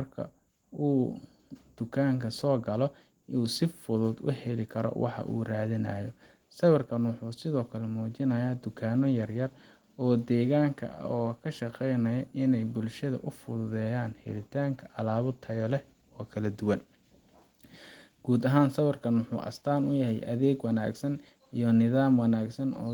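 No faults are audible in the speech; the Opus voice compression it passed through keeps the band open to about 20 kHz, which fits fullband hybrid coding at around 24 kbps, and leaves only light coding texture.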